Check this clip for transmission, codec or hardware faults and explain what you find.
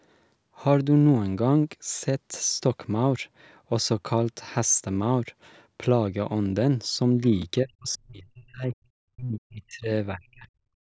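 Two kinds of fault can be heard: one repeated buffer and three stretches of speech suppressed in double talk.

At 7.42 s there is a repeated buffer. New audio arrived late, so the device replayed its last block once. The repeat is tiny and fits a 10 ms buffer. It sounds like a brief click at a hard join rather than a stutter.

From 7.62 to 8.75 s, 9.13 to 9.91 s and 10.1 to 10.48 s, the speech dips sharply, by about 35 to 40 dB at its deepest. The likely cause is speech suppressed in double talk. Both sides spoke at once, and the echo canceller turned the near talker down with the echo. The call microphone processing caps the sound at 8 kHz, which is normal.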